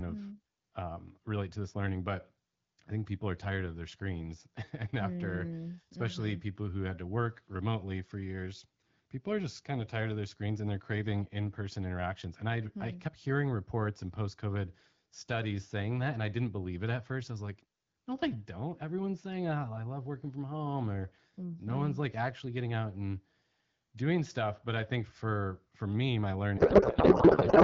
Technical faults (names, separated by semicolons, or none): codec payload misread